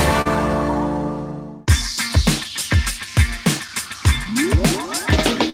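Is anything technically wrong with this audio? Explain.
Yes. There are three kinds of timing fault.

Clock drift between sender and receiver runs through the whole clip. The sender's clock is roughly 3% slower than the receiver's. The jitter buffer keeps draining, so the receiver must pad the stream. Small timing hiccups recur at uneven intervals.

A short stall from a late packet occurs at 0.21 to 0.27 s, and another at 5.49 to 5.54 s. Each time a packet arrived late and the buffer ran empty. The receiver held the last sound, for 41 ms and then 37 ms, and then resumed. Nothing is lost, but a sound lingers too long.

Repeated timing corrections run from 1.34 to 5.04 s. To keep pace with the slower sender, the receiver repeats short pieces, playing at 98% speed. About 70 ms is added in all. The edits are small and unevenly spaced.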